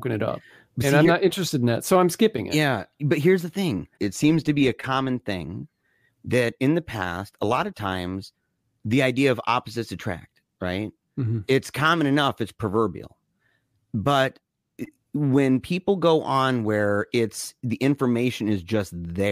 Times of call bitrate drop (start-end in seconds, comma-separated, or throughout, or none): none